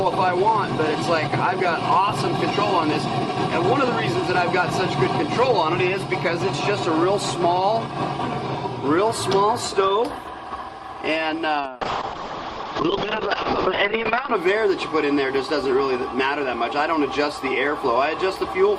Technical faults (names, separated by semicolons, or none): call bitrate drop